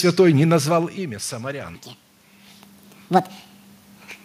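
From 1.75 s to the end, the speech is a section at the wrong speed: it runs about 1.66 times faster than recorded, so pitch climbs by roughly ten semitones and syllables rush together. The cause is likely playback or editing against the wrong clock. Because tempo and pitch jump together at one instant, this differs from a pitch-shift effect, which keeps timing intact. It also differs from the talker's movements near 0.5 s and 2 s, which change only loudness.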